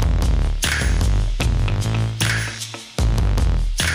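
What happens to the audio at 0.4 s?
Nothing goes wrong at 0.4 s; the audio carries on intact through that moment with no dropout, click or distortion.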